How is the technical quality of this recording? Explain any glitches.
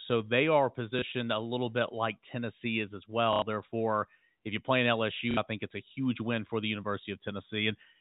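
Two brief robotic stutters and one small blip interrupt the speech, all from packet loss with the last packet repeated; the audio is also band-limited to about 4 kHz, the expected narrow sound of G.711 telephone coding.

They come at 0.99 to 1.02 s, between "they are" and "a little bit like"; at 3.33 to 3.42 s, just after "is as"; and at 5.31 to 5.37 s, between "if you play in" and "I think it's a". The first, a single repeat, is a small blip; the other two are short buzzy repetitions. The gaps last 30, 90 and 60 ms, which fits one, three and two lost 30 ms packets. The receiver fills each gap by replaying the last packet it received, and the longer runs buzz at about 33 Hz.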